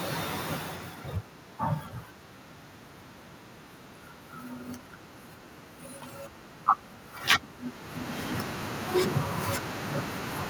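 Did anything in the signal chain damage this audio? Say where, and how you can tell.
No, nothing in the chain has hurt this speech; the steady room noise belongs to the recording, and the level shifts near the half-second mark and again around seven and a half seconds are just the talker moving relative to the microphone.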